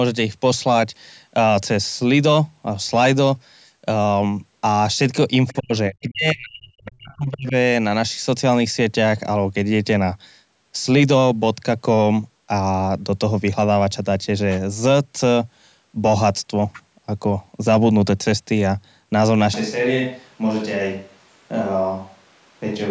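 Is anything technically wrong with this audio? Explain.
Yes. From 5.47 to 5.53 s there is a brief scrap of the other side's voice leaking through, quite faint. It is likely loudspeaker echo the canceller missed.

Speech is then suppressed in double talk, from 5.53 to 5.72 s and from 5.89 to 7.54 s. The voice drops sharply. The likely cause is the canceller turning everything down during overlap.

At 19.54 s there is a sudden switch to a distant microphone, which lasts to the end. The voice turns hollow and roomy and a little quieter, with more room noise. The close microphone likely dropped out.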